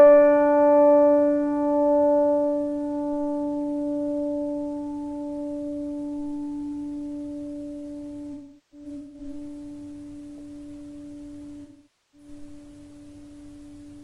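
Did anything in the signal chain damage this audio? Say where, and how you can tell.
Yes, at the codec: AAC frame loss with concealment, scattered across 8.33 to 9.34 s (longest run about 400 ms) and again from 11.62 to 12.28 s. The decoder rebuilds missing frames from the last good spectrum, giving smeared, noisy patches instead of a dropout's hard clicks or silence.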